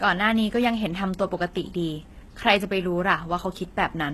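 Speech runs the whole way through with plainly audible HE-AAC compression damage, likely from spectral band replication at a very low bitrate, around 16 kbps. Unlike a plain low-pass or MP3 smearing, the treble stays bright up to a hard ceiling near 12.3 kHz but is copied from lower bands, so s sounds come out gritty and metallic.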